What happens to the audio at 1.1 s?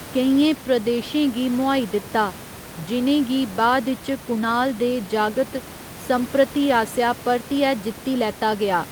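At 1.1 s the audio is intact, with only the room's own background noise sitting about 15 dB below the speech.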